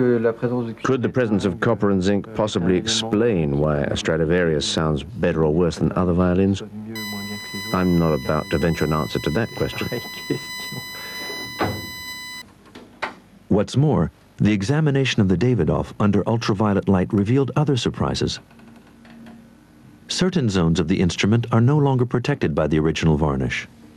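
Throughout the clip there is gain pumping, most likely from input gain set far too high and a fast limiter or compressor clamping down on every loud sound. The gain swings by around 10 dB, leaving the audio squashed.

From 6.95 s to 12.42 s there is USB whine. Current drawn in the bus's 1 ms frames leaks in through power or ground, producing a fixed-pitch whine built on 1 kHz, strongest at 2 kHz, about 20 dB below the signal.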